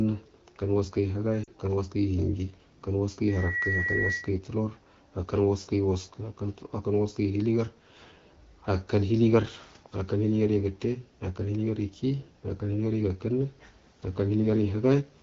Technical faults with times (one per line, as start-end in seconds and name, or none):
1.43-1.49 lost AMR speech frames
3.27-4.36 loudspeaker feedback squeal